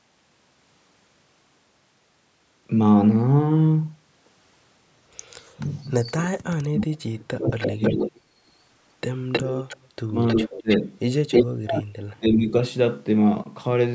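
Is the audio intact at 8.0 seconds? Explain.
No. Speech is suppressed in double talk from 6.65 to 8.23 s. It dips by roughly 35 dB at worst, likely because the echo canceller turned down its own talker along with the loudspeaker echo. An echo leak also runs from 7.47 to 8.09 s. It is a copy of the voice delayed 315 ms and about 5 dB quieter, likely far-end loudspeaker sound that got past the canceller.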